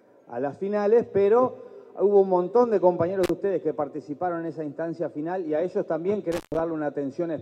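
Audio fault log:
3.24 s and 6.32 s to 6.60 s, intermittent contact: the sound drops out abruptly with crackle at the start and end of each gap, leaving faint hiss. The first break opens for about 38 ms, the second for about 122 ms. A loose cable or plug is briefly losing connection. The signal path opens and closes again, and the rough, bouncing contact at each edge produces the crackle around the silence.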